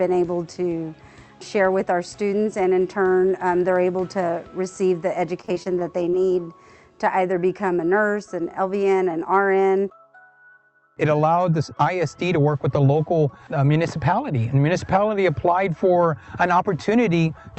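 Repeated packet loss (robotic sound) runs from 5.41 to 6.14 s: about half a dozen short dropouts, the longest 29 ms, are each patched by extending the preceding sound, giving a choppy texture with pieces missing.

Jitter buffer slow-down follows from 6.15 to 6.49 s: the receiver repeats small pieces of audio to rebuild its reserve, adding 39 ms, so this stretch plays at 90% speed without a pitch change.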